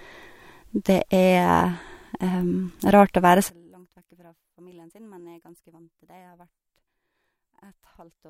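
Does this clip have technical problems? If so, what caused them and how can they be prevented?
Yes. From 3.50 s, right after "å være", to the end, the speech drops by about 31 dB and turns faint, likely because one channel was inverted and the mono sum cancels the centred voice. Check channel polarity with a correlation meter before summing to mono.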